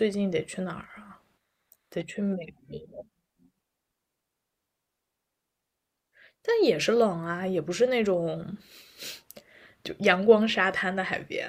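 Nothing here trips up the ear: the speech runs along steadily with no technical faults to point to anywhere in the recording.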